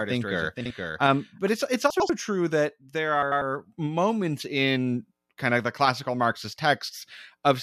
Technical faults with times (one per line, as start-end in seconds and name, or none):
0.00-1.48 doubled audio track
0.61-0.70 frames out of order
1.90-2.10 frames out of order
3.22-3.42 frames out of order